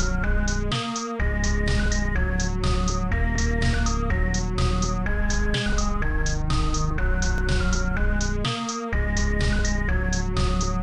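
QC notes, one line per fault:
3.36–3.38 s and 7.38–7.41 s, overlapping chunks: a brief stutter-click at each join, 4.0 s apart, where about 25 ms of sound plays twice. Each processed chunk began before the previous one ended, so the overlapping slice repeats.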